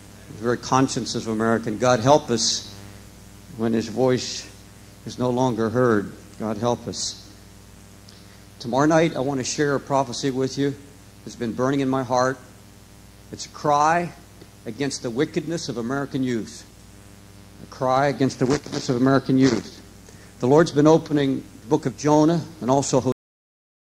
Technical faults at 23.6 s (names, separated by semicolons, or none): cut-off end